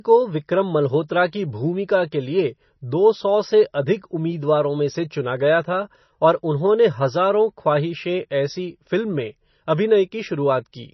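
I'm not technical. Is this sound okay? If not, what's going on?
No. The speech sounds dull and watery from start to finish. Nothing above 5.9 kHz survives, so s sounds lose their crispness. The damage is heavy, likely from MP3 compression squeezed too hard, which throws away treble and fine detail to save space.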